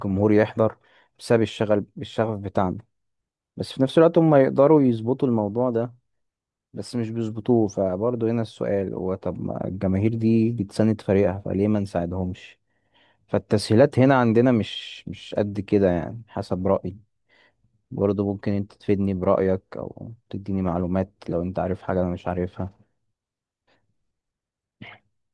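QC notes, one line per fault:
Nothing stood out on listening.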